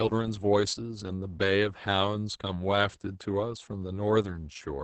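A speech clip with Opus voice compression throughout. The top end stops near 8 kHz, and coarse linear-prediction coding of the excitation leaves the speech muffled, hoarse and slightly robotic. That heavy damage fits SILK-mode Opus at around 10 kbps.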